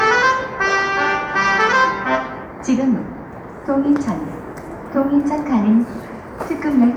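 No audible technical faults here.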